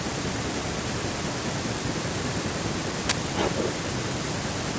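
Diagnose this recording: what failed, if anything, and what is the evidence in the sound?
The fault is in the driver or buffer stage. An uninitialised buffer was played from 3.09 to 3.12 s. It is heard as a sudden, very loud burst of harsh digital noise, about 21 ms long. That length fits a 1024-sample buffer. The device sent a block out before any audio had been written into it. Whatever was left in memory was read as samples. The result is noise, not speech.

The second fault is in call processing, and it is an echo leak. From 3.36 to 3.72 s a delayed copy of the speech is heard. It trails the original by 386 ms. It is roughly 5 dB louder than the direct speech. The likely cause is a far end playing the call on a loudspeaker. Its echo canceller failed to remove what its microphone picked up, so that sound returned down the line. The call's microphone processing is limiting the audio to 8 kHz, as expected.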